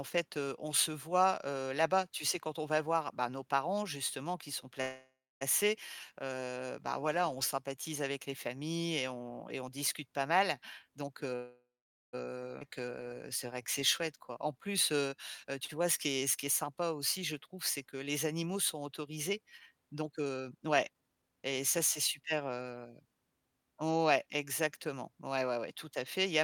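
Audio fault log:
4.81–5.43 s, call audio freeze: after "parents justement qui sont", the last sound continues and fades to about 0.29 s of silence, likely from held-up packets. The speech resumes with nothing lost, just 0.6 s later.
10.88–11.35 s, jitter buffer speed-up: after "on discute pas mal", speech runs at 142% speed, same pitch. Roughly 0.2 s of pitch periods are cut to shrink an overfull buffer.
11.36–12.15 s, call audio freeze: the sound is stretched into a fading tail, then about 0.49 s of silence, likely a packet delay. Speech picks up where it stopped, 0.77 s late.
12.6 s, skip ahead: playback jumps forward almost seamlessly. Roughly 0.7 s of speech is dropped, and the two sides are joined nearly directly.
12.67–15.17 s, jitter buffer slow-down: speech plays at 92% speed at unchanged pitch. Repeated pitch periods add about 0.2 s to rebuild the buffer, drawing sounds out.
15.44–15.74 s and 20.00–22.57 s, jitter buffer speed-up: speech hurries at 109%, then at 124% after "les animaux sont autorisés", pitch unchanged. 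Roughly 40 ms and 0.7 s of pitch periods are removed.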